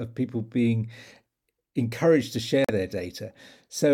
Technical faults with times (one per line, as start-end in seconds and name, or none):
2.64-2.70 corrupt frame muted